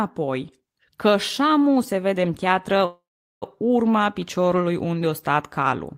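Speech with a call audio freeze from 2.85 to 3.44 s: the sound smears into a fading buzz, then about 410 ms of silence before speech resumes where it stopped. Nothing is lost, but 564 ms of delay is added. The likely cause is late packets emptying the jitter buffer.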